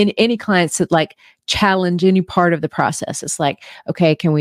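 No audible faults anywhere in the speech recording; nothing to flag.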